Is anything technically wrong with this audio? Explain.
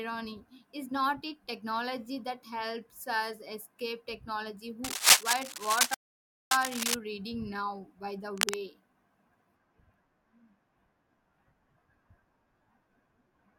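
Yes, there are two kinds of fault in this speech.

Cable scratch noise runs from 4.84 to 6.94 s and again from 8.37 to 8.59 s, around 5 dB above the speech. It is likely a worn connector whose contact flickers, and it shows as ragged broadband smears on a spectrogram.

A playback stall cuts the sound from 5.94 to 6.51 s, about 0.57 s, likely from the player starving for data. The waveform shows a flat silent gap, and the speech resumes afterward.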